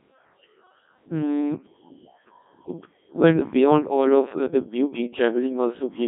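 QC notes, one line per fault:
Throughout, Codec 2 vocoder: speech rebuilt from pitch, voicing and spectral envelope only, as at about 1.6 kbit/s, so it sounds robotic and buzzy within a 200 Hz to 3.7 kHz band.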